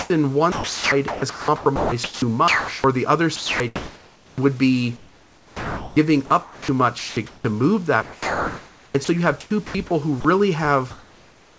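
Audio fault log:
0.00–2.84 s, 3.36–4.41 s, 4.97–7.45 s, 8.03–10.25 s, sound chopped by the voice detector: the sender's voice detector likely kept toggling transmission off and on, so about 1.6 s, 0.86 s, 1.7 s and 1.2 s of these spans became synthetic comfort noise, clipping speech before and after "the other" into choppy fragments.
10.91–11.58 s, comfort noise in place of the background: transmission likely stops once speech ends, and the receiver fills the pause with generated noise, about 30 dB below the loud passages and about 1 dB quieter than the real room noise. That noise sounds flat and featureless against the G.722-style band that stops at 8 kHz.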